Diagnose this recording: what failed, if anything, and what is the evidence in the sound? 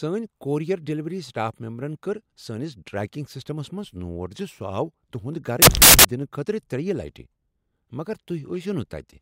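Sample-format conversion failed: samples built from the wrong bytes. From 5.62 to 6.05 s the speech becomes loud, harsh broadband noise, as misassembled bytes turn low bits into high ones.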